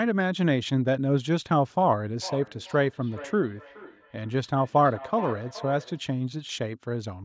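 From 2.22 to 6.05 s there's feedback echo between two devices: a second device in the room replays the call audio into this microphone, and the echo canceller can't remove it. The speech keeps coming back roughly every 400 ms, thinner and ringier each pass, peaking about 15 dB below the speech.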